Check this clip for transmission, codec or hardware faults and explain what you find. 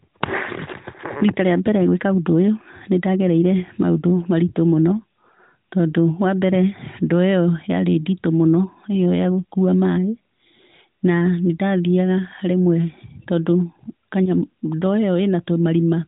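No faults found in this speech recording.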